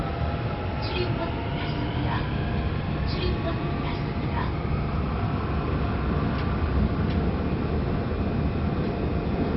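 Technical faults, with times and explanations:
Throughout, MP2 compression damage: nothing survives above about 5.6 kHz, and the remaining bands flicker with a gurgling, granular texture. This is likely Layer II sub-band coding starved of bits, which fits heavy compression around 32 kbps, switching off upper bands and coarsely quantising the rest.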